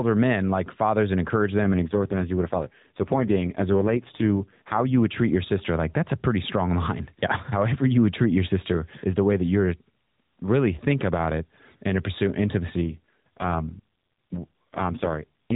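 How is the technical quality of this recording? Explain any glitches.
The speech has two stretches of AMR rate drop over a mobile-codec narrowband signal capped at 4 kHz. The first runs from 1.62 to 5.05 s, between "like fathers and encourage" and "treat your sister like". The second starts at 12.82 s after "it and to pursue" and lasts to the end. The codec falls to a much lower rate, fitting a shift from 12.2 to 4.75 kbps, so fewer pulses model each frame and the voice turns buzzy and synthetic. Unlike packet loss, nothing drops out and the band stays the same.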